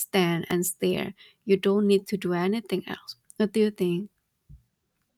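A speech clip with one electrical switching spike at 0.51 s. It is a sharp snap, over in a few milliseconds. It peaks at about -15 dBFS and sits on top of the speech rather than replacing it. The likely cause is a nearby switch, motor or static discharge arcing briefly. The audio line picks up that burst of interference as a click. Nothing in the recorded sound itself produces it.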